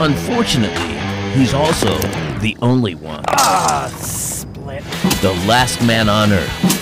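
The signal was driven about 12 dB beyond what one stage of the chain could pass, so from start to finish every peak that exceeded the limit was sliced off flat. This is hard clipping. Only a small fraction of the waveform, around 3 percent, sits above the ceiling, but those squared-off tops throw harmonics high into the spectrum, so each loud moment carries a harsh, gritty fuzz and crackle riding on the peaks.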